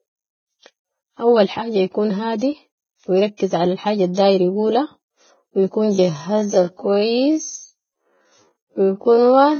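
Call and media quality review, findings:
Low-bitrate audio saved at a high bitrate: whole clip. Old coding artefacts retained. Likely a ~13 kbit/s Vorbis-type source re-encoded to 256 kbit/s MP3; the second pass restores nothing.

Time-stretched section: 5.88 s to end. Pace drops abruptly to 0.56x speed, pitch unchanged, speech drags. Likely a time-stretch stage padding length by repeating short segments.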